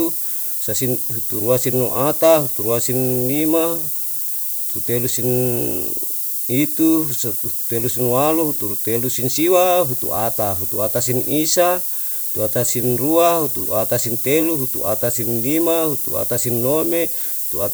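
Speech, and it's buried in low bit depth with noise shaping from start to finish. The sound has been squeezed down to what seems to be about 5 bits, and the rounding error has been pushed up toward the top of the band. So you get a steady, thin hiss that climbs sharply into the highs, and it sits at roughly the same level as the voice itself, which makes the whole thing sound gritty and washed over.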